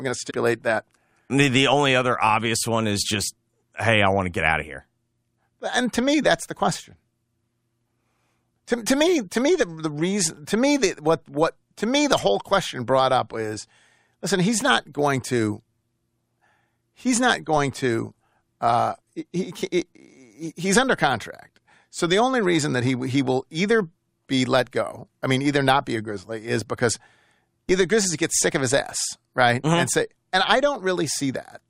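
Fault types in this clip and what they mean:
Damaged data in a compressed stream: corrupt frames make the decoder lose sync, giving a brief disturbance from 0.29 to 0.31 s.
DC step: the waveform's zero line jumps at 17.57 and 27.69 s, heard as a low thump, with the offset decaying through a 5 Hz high-pass while the speech continues intact.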